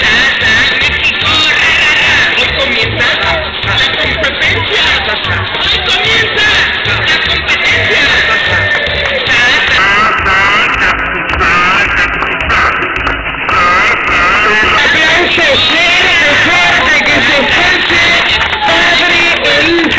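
From 9.78 s to 14.78 s the sound drops about five and a half semitones in pitch and slows to roughly 0.73 times its proper speed, sagging and sluggish, with pitch and tempo falling together. That joint shift is the signature of a wrong sample rate: the samples are read out more slowly than they were captured, with no conversion. The 0.726 ratio fits material made at 22 kHz being played back at 16 kHz.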